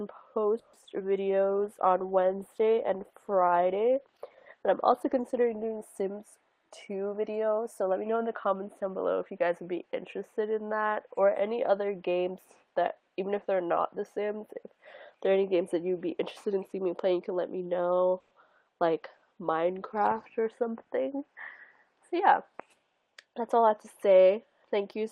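Call audio with several network faults. From 0.59 to 1.02 s, repeated packet loss gives a choppy, robotic stretch. Four holes are patched by stretching the last sound, the longest 140 ms. About 40 percent of that span is filler. From 1.43 to 5.90 s a call bitrate drop takes the encoder from 32 to 15 kbps. The sound turns coarse, watery and dulled at the top. Jitter buffer speed-up runs from 6.52 to 8.04 s and again from 20.39 to 21.28 s. Short pitch-period slices are cut, so the audio plays about 8 percent fast at unchanged pitch. Roughly 150 ms and 70 ms are removed. At 18.20 to 18.33 s, a brief 110 ms buzzy fill appears, then the audio resumes with nothing lost. This is likely a call audio freeze from held-up packets emptying the buffer.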